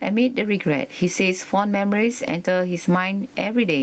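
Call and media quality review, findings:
Gain pumping throughout the speech. Level swing around 15 dB. Dynamics squashed. Likely cause: input gain set far too high, with a fast limiter clamping every peak. Room noise about 44 dB below speech, within an 8 kHz call band.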